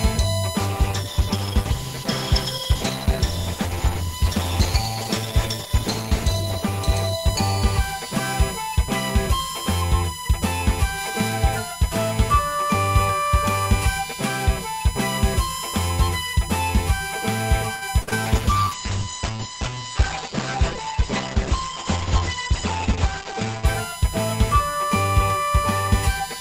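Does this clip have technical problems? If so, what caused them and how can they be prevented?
Yes. A steady whine at 1 kHz sits under the whole clip, roughly 10 dB below the sound, loud enough to hear throughout. This is USB whine: the bus draws current in 1 ms frames, and that ripple leaks into the audio path through shared power or ground. Powering the interface from a clean supply, using a ground-loop isolator or moving it off a busy USB hub prevents it.

From 0.6 to 9.43 s, and again from 18.26 to 23.71 s, the sound turns rough and watery. In the second stretch it is also audibly muffled. These are call bitrate drops: the bandwidth estimate collapsed, so the encoder fell from 96 kbps to 13 kbps, and later from 96 kbps to 10 kbps. That second fall also cut the audio bandwidth from 20 kHz to 8 kHz. A steadier connection with more headroom, or wired instead of wireless networking, prevents it.

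At 17.75 s a sound is held too long, for about 63 ms, with a slight buzz or dip, and then continues without losing anything. This is a short stall from a late packet: the jitter buffer ran dry, and the receiver stretched the last sound until the packet arrived. A larger or adaptive jitter buffer and a less congested network prevent it.

From 18.02 to 18.09 s the last sound is held and fades, and then jumps ahead with about 60 ms gone. This is a burst of packet loss: consecutive packets never arrived in time, so the receiver extended and faded the last sound. Forward error correction and a more stable link prevent it.

Right after, from 18.09 to 18.13 s, there is a brief smear where about 20 ms is missing. This is short concealed packet loss: the receiver filled the gap by continuing the previous sound, then blended back into the real audio. The same network fixes prevent it.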